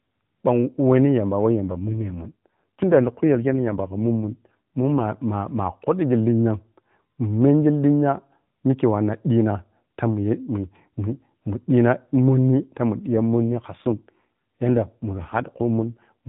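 AMR rate drop at 1.51 to 5.06 s, just after "wehni yamba", and again at 13.02 to 16.28 s. The speech keeps the same narrowband AMR-NB telephone band with no gap, but it turns rougher, buzzier and more synthetic. That fits the mobile link stepping the codec down from its lightly coloured 12.2 kbps mode to around 5.9 kbps, spending bits on error protection instead of speech detail. Between the two stretches, the higher rate returns.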